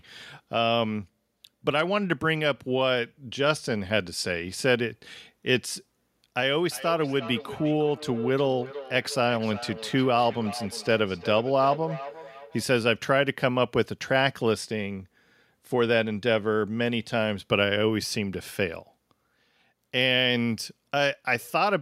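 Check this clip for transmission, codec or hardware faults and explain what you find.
One fault, a feedback echo between two devices, from 6.59 to 12.68 s. A second device in the room replays this speech and the sending microphone picks it up again, which its own echo canceller cannot remove. Each word returns roughly 0.4 s later, thinner and ringing, peaking about 13 dB below the speech.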